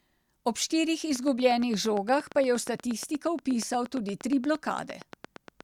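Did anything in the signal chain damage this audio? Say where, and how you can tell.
Yes. From 1.16 s to 5.62 s a train of clicks ticks evenly over the speech, and through its pauses, at about 8.5 per second, some forty near-identical pops peaking about 5 dB above the speech. The likely source is interference coupling into the analogue wiring or a faulty connection or power supply.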